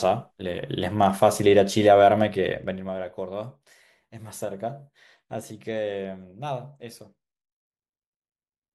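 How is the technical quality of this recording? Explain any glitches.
The recording has one clear glitch: a burst of zipper noise during a level drop. From 2.52 to 2.92 s, the speech is turned down by roughly 15 dB. The change is made in 1 dB steps, about 30 of them a second, with no smoothing between them. Each jump leaves a tiny click. Together the clicks form a fast ticking, a zipping texture laid over the voice while it fades.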